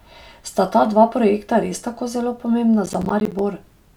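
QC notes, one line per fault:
2.86–3.39 s, processor overload crackle just after "projekta res tako zelo": about ten missed 10 ms buffers dropped to silence, leaving hard-edged gaps that sound like gritty tearing.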